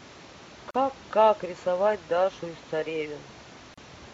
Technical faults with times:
0.71-0.74 gap at a join of encoded pieces
3.74-3.78 gap at a join of encoded pieces

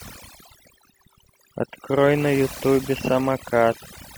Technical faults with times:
0.00-4.17 overdone noise removal

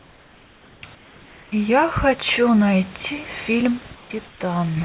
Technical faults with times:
0.00-1.52 comfort noise in place of the background
3.78-4.77 one channel drops out
3.95-4.40 comfort noise in place of the background

